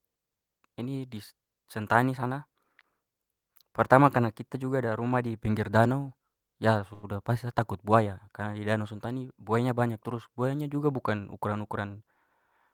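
From 6.93 to 7.05 s a sound is held unnaturally long, with a slight buzz or dip, before the speech carries on with nothing lost. This is a short stall from a late packet: the jitter buffer ran dry, so the receiver stretched the last sound by about 97 ms.

Between 11.79 and 12.27 s the speech briefly sounds hurried, running about 9 percent fast at unchanged pitch. That is a jitter buffer speed-up: with excess audio queued, the receiver trimmed tiny pitch-period slices, around 50 ms in total, to shorten the delay.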